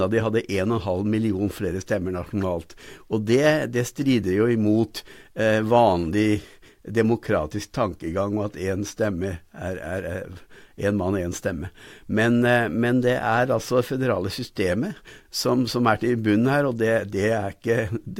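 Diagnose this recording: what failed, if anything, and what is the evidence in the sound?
Nothing failed; no stage in the chain shows a fault.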